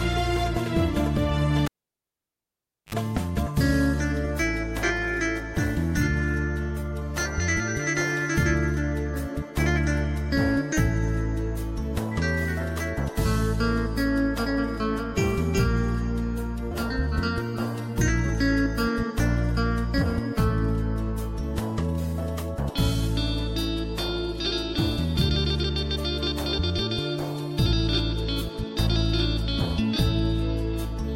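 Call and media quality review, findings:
Cable pulled and plugged in, 1.65 s to 2.95 s. Live input cable disconnected at the jack and reseated. Pop at the pull, then about 1.25 s of near silence with the signal path open. While only the tip touches, a 58 ms burst of 50 Hz mains buzz. Second pop as the sound returns. Probable component: input cable and jack.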